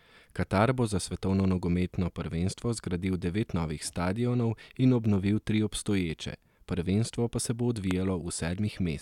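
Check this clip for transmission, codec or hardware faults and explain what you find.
One fault turns up: a single loud pop at 7.91 to 7.93 s. A sudden voltage step entered the signal path, likely from a plug being moved, a switch, a static discharge or a driver glitch, and the downstream circuitry shaped it into a brief pulse. It comes through as one sharp pop, peaking around 15 dB above the speech, lasting barely 20 ms, while the speech continues uninterrupted beneath it.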